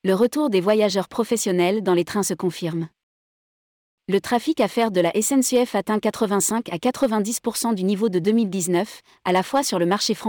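Speech with hard clipping at 0.09–1.33 s, 5.55–5.62 s, 6.86–7.06 s and 9.29–9.94 s, where peaks overdrive a stage by about 2 to 4 dB and are cut flat, giving crackle on loud syllables. The waveform shows squared-off tops, and the spectrogram shows harmonic smearing far up the spectrum.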